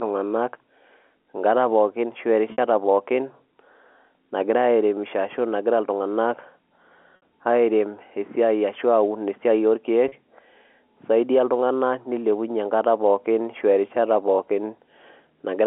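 Speech carried over G.711 telephone coding, its band held to 300–3400 Hz, has packet loss with pitch repetition at 2.52–2.58 s, 7.16–7.22 s and 10.08–10.12 s. The gaps last 60, 60 and 40 ms, which fits runs of two or three 20 ms packets. The receiver fills each gap by repeating the last pitch cycle, so each one is heard as a brief held, buzzy tone. On a waveform these spots show identical periodic cycles. A spectrogram shows flat, frozen harmonic stripes there.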